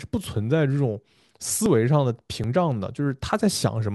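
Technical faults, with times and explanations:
1.66 s and 2.44 s, dropped buffer (overrun): the speech jumps abruptly, losing roughly 20 ms and then about 40 ms. The likely cause is that samples weren't collected before the hardware overwrote them, joining the two sides with no silence between.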